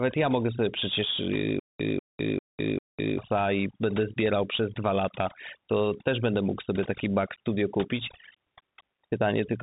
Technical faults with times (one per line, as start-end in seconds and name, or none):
0.00-9.63 overdone noise removal
0.00-9.63 Bluetooth CVSD headset codec
1.60-3.18 stutter with silent gaps